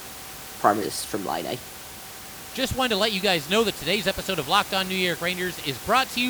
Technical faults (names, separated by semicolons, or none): compressed frames skipped